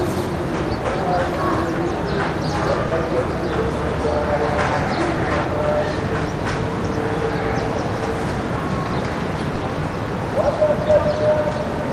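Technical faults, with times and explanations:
2.87–2.93 s, short concealed packet loss: 40 ms of audio reached the decoder too late, so the receiver extended the preceding sound and blended back, leaving a brief smear.
9.55–9.63 s, burst of packet loss: a 60 ms run of audio was lost, so the receiver stretched the last sound and faded it down, then resumed with that stretch missing.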